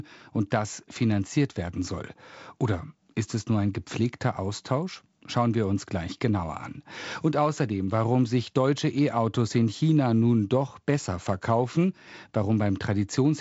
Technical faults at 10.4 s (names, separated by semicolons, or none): none